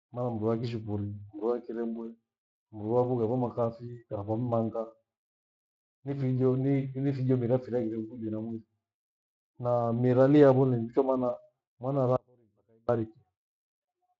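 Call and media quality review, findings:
Audio dropout to a faint residue, 12.16–12.89 s (0.73 s): abrupt cut to a faint leak about 35 dB down. Likely source interruption while the downstream path stayed live.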